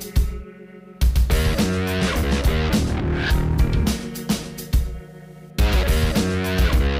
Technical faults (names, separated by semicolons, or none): video or display buzz